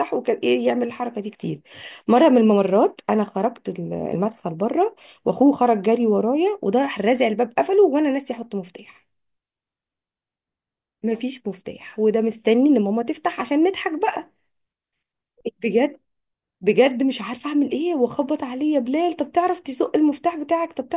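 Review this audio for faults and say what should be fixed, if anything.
No faults; nothing to fix.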